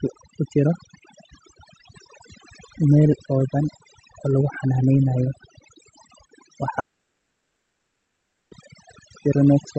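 Overdone noise removal runs through the whole speech clip. A noise reducer set too hard has switched off individual frequency bands near its noise estimate, so the background drops and breaks up into twinkling specks. Unlike codec coding noise, the damage follows the noise floor, eating quiet parts of the voice.

From 6.79 s to 8.53 s comes what is likely a long network dropout. The last sound carries on briefly and fades, then about 1.7 s of silence follows, and the speech resumes with that stretch simply gone. A short packet loss would leave only a brief glitch.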